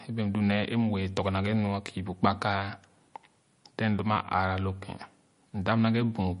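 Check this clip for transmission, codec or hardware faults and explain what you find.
One fault runs through the whole clip: MP3 compression. The speech has no content above 10.6 kHz, so sibilants sound dull. The damage is plainly audible as a watery, swirly texture, with metallic chirps on s sounds and smeared consonant attacks. The likely cause is an encoder short of bits, which fits a low bitrate around 40 kbps. It removed the treble and switched weak frequency lines on and off between frames.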